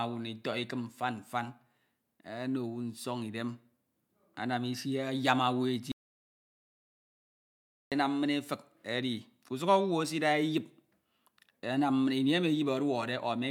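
Speech throughout, and the one real problem is a playback stall: at 5.92 s the sound just drops out mid-flow and stays completely silent for a full 2 seconds, picking up again at 7.92 s. A hole that clean and that long most likely comes from the player running out of buffered data, or its output thread getting blocked, so nothing reached the output until it recovered.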